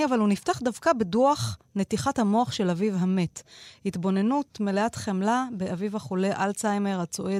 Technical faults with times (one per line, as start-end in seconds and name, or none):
none